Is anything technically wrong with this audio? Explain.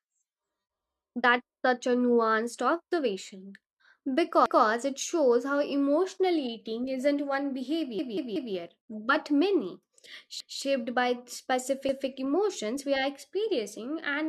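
Yes. Stutters at 4.46 s, 7.99 s (after "emotional eating isn't one", three extra repeats), 10.40 s (after "but many") and 11.89 s (before "emotions we are experiencing") replay the same 0.19 s slice with hard joins. These are repeated buffers: late audio made the device replay its last block, which fits an 8192-sample buffer.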